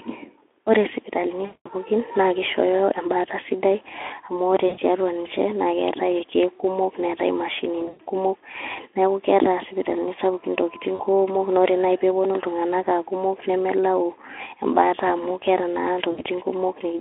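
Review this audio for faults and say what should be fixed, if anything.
VoIP packet loss concealed by the speech codec shows up at 1.45–1.69 s, 4.67–4.79 s, 7.79–8.01 s, 10.95–11.02 s (between "isipitalini sapukin intokitin" and "kuumok ore") and 16.11–16.22 s. In each, the decoder extrapolates from its last pitch and filter into a fading buzzy tone or coloured noise, and the speech stays thin briefly afterwards. Forward error correction or packet redundancy on the link, plus a deeper jitter buffer, would stop these dropouts.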